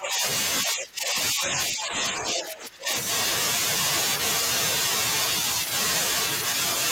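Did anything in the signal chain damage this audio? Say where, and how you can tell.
Yes, in the call processing. The speech dips from 0.0 to 0.24 s and 0.64 to 2.91 s, by up to about 15 dB: likely speech suppressed in double talk.

Same stage: brief scraps of the other side's voice leaking through at 1.46–1.51 s and 2.42–2.51 s, well below the talker, likely loudspeaker echo the canceller missed.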